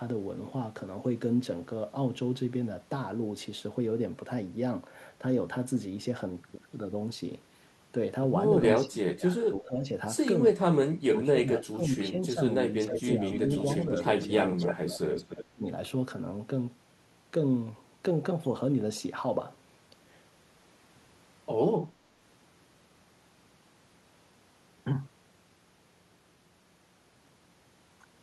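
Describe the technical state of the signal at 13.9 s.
At 13.9 s the speech carries a delayed second copy of itself, trailing about 293 ms behind and only a few decibels quieter, from 12.86 to 14.76 s. This echo leak likely comes from a far-end loudspeaker whose echo canceller let its microphone pickup return.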